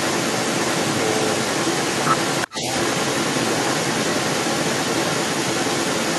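A delayed second copy of the speech trails the original by 380 ms from 0.0 to 6.18 s, only slightly quieter than the direct sound. This is echo leak, likely from a loudspeaker on the far end whose echo canceller let its microphone's pickup slip back into the call.

From 2.47 to 2.53 s the speech briefly dips by around 20 dB, a short, sharp loss lasting well under a tenth of a second. This is speech suppressed in double talk, likely the canceller turning everything down when both sides overlapped.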